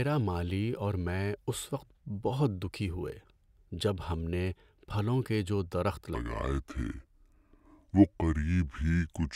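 At 6.15 s, right after "پھلوں کے جو درخت", the speech drops into a section at the wrong speed that runs to the end of the clip. Playback slows to about 0.71 times the original rate, and because speed and pitch move together the voice falls by roughly seven semitones, turning deep, heavy and drawn out. The abrupt change points to a likely cause of this segment being played back or resampled against the wrong clock.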